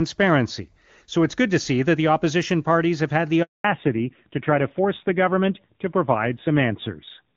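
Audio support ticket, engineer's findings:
Handover gap, 3.42 to 3.64 s, right after "parties have had the". Speech cuts to silence for 220 ms. Network switch; no frames delivered.

Fallback to narrowband, 3.64 s to end. Nothing above 4 kHz, speech duller and rougher. Call dropped from HD Voice wideband to an older narrowband codec.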